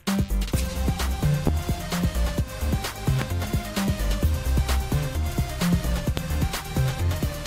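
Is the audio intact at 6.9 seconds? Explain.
Yes, the audio is intact at 6.9 seconds, with no dropout, glitch or other fault audible at that moment.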